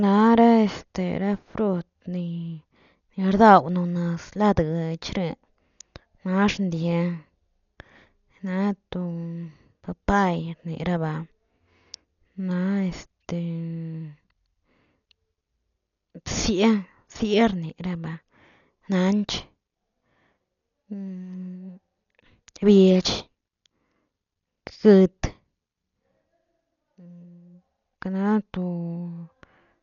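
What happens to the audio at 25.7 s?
At 25.7 s the speech carries the same damage heard through the whole clip. It sounds dull and band-limited, with nothing above about 6.9 kHz. A rough, fluttering noise surrounds the voice's tones. This points to heavy Dolby Digital compression at a very low bitrate, likely around 40 kbps. Starved frequency lines get no real detail, so the decoder fills them with noise.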